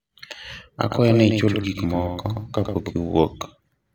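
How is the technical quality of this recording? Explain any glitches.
The recording has one clear glitch, a doubled audio track, from 0.89 to 2.93 s. A second copy, likely captured through a slower path, lags about a tenth of a second and sits a few dB lower, so the speech sounds like a dry slapback that starts and stops abruptly.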